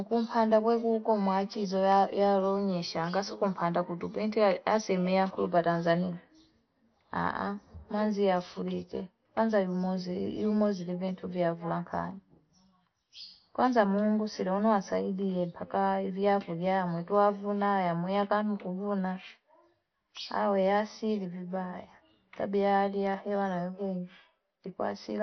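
Speech that sounds dull and gurgling throughout, with nothing above 6.2 kHz, heavy granular distortion, and upper bands dropping out. This is likely MP2 compression at a low bitrate, around 48 kbps.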